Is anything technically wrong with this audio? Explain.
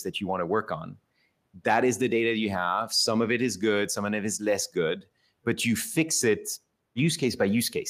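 No, nothing technically wrong turns up anywhere in this speech recording, so there's nothing here to flag.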